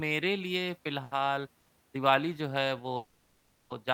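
A short stall from a late packet occurs at 1.03 to 1.14 s. A packet failed to arrive on time and the jitter buffer emptied, so the receiver held the last sound for about 80 ms until the packet turned up, then resumed from the same point. Nothing of the speech is lost, but that moment is drawn out with a faint buzzy smear, and everything after it runs 80 ms later.

Call audio freezes occur at 1.59 to 1.72 s and 2.96 to 3.73 s. The speech stops moving forward while the last sound carries on as a fading buzz or hiss, never dropping to silence. The first extends the audio by 100 ms. The second extends it by 740 ms. The likely cause is packets held up in transit, draining the jitter buffer until they arrived. The speech then continues from where it halted with nothing missing, only later by 100 ms and 740 ms respectively.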